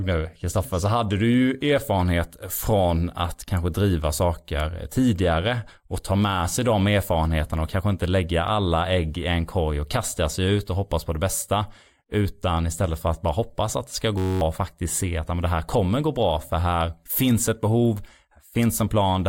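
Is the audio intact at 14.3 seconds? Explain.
No. From 14.18 to 14.41 s, after "hoppas att det ska", a system hang loop repeats one 10.67 ms buffer, likely 512 samples, as a steady 93.8 Hz buzz, not a slower machine-gun stutter.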